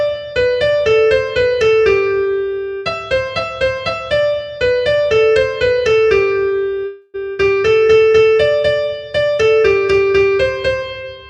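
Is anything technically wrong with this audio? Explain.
Yes. At about 6.85 to 7.16 s there is a call audio freeze. The last sound is stretched into a fading buzz or hiss for roughly 0.3 s, most likely because packets stalled and the jitter buffer emptied. The audio then resumes where it stopped, with nothing lost, only delayed. On a spectrogram, frozen, smeared harmonics show as a decaying horizontal band.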